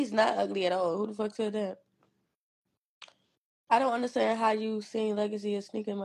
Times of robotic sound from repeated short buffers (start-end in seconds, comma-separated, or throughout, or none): none